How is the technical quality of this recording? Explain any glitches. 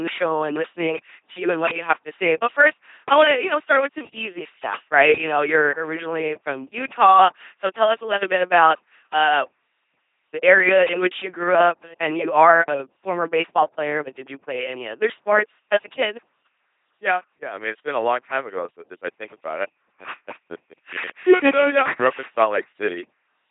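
Poor: heavy codec coloration runs through the whole recording. An LPC-10 vocoder is present throughout, with every frame sent as pure buzz or pure noise, sounding robotic and mechanical at a rate that fits 2.4 kbit/s, with nothing above 3.7 kHz.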